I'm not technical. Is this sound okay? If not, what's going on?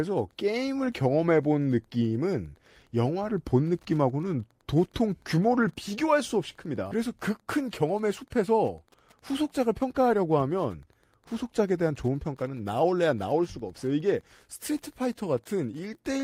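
No. Throughout the recording there is Wi-Fi interference: a nearby Wi-Fi radio's regular signal leaks into the audio wiring and gets turned into sound. You hear a faint, steady ticking about ten times a second behind the speech, repeating every 102.4 milliseconds.

From 7.57 to 8.49 seconds there is a jitter buffer speed-up. The receiving system had stored up more speech than it wanted, so it trimmed tiny slices to catch up, about a twentieth of a second in total. The speech there runs 5% faster at the same pitch and sounds slightly rushed.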